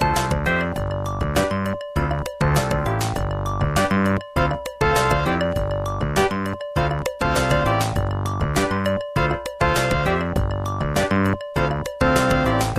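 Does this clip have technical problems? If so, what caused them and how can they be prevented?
No, nothing technical stands out here, so there's nothing that needs fixing or preventing.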